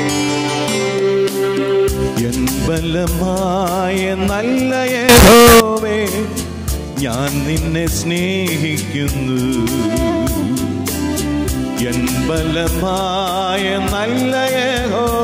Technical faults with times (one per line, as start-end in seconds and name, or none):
5.09-5.60 float read as integer